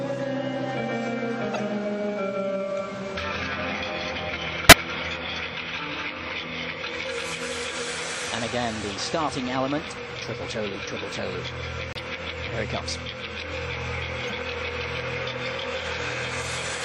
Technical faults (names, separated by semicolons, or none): MP3 compression; corrupt frame decoded; corrupt frame muted